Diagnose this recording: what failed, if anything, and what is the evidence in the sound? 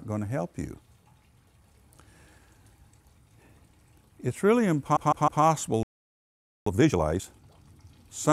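Repeated frames, 4.95 to 5.42 s: a 156.7 ms block of compressed audio plays three extra times, a stutter that adds about 470 ms. The codec or storage stage wrote or delivered the same run of frames repeatedly, so the decoder replayed it.

Playback stall, 5.83 to 6.66 s: the sound stops mid-flow for about 833 ms, then resumes. This is likely a playback-stage failure: the player either ran out of buffered data or had its output thread blocked, and it output silence until it recovered.

Time-compressed catch-up, 6.66 to 7.48 s: right after the stall, the audio runs at 2.0 times speed while keeping its normal pitch. The player is clearing its backlog by cutting out small pieces and cross-fading across the gaps.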